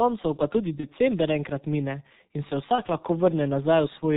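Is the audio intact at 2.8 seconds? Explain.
No. From 2.76 to 2.81 s there is VoIP packet loss concealed by the speech codec. The gap fits a single lost 30 ms frame. The decoder extends its last pitch and filter at falling gain, so the sound smears into a brief fading buzz or coloured noise rather than cutting to silence or clicking, as a plain dropout would. The G.723.1 codec also runs through the moment at 6.3 kbit/s. Nothing above 4 kHz survives, and its slow-updating model leaves the speech muffled, hoarse and blurred at consonants. Unlike the concealment, this damage is steady across the clip, not confined to one instant.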